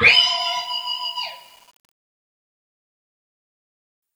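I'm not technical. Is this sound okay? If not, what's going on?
No. From 0.40 to 4.02 s there's grainy fuzz that tracks the sound, which is low bit depth without dither, likely from rounding to only 8 bits.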